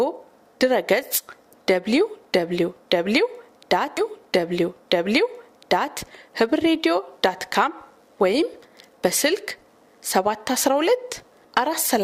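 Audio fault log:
3.97–5.97 s, stream segment repeated: right at 3.97 s there's a small blip where playback jumps back, and then a full 2.0 seconds of material you've already heard plays through again before things carry on at 5.97 s. That's what you get when the player fetches or queues the same chunk of the stream twice and just plays both copies in a row, so the clip ends up 2 seconds longer than it should be.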